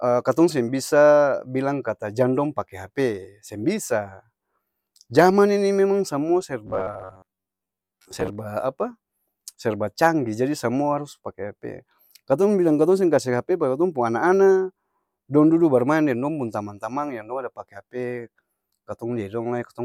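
Robotic sound from repeated short buffers runs from 6.67 to 8.36 s. Across that stretch the speech collapses into a stiff, metallic buzz pitched at 93.8 Hz that still roughly tracks the words. The likely cause is audio arriving too slowly, so the playback side fills the gaps by looping a fragment of about 10.7 ms, one cycle of that buzz. Roughly half of the sound there is repetition, and the real material it replaces is skipped.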